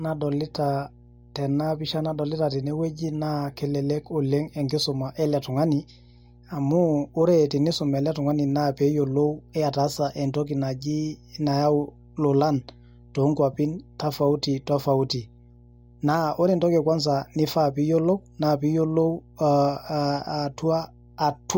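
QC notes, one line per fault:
Throughout: mains hum, a steady low 60 Hz tone with some low harmonics sitting about 25 dB below the speech, present under every pause. A ground loop or nearby transformer is leaking the 60 Hz power line into the signal path.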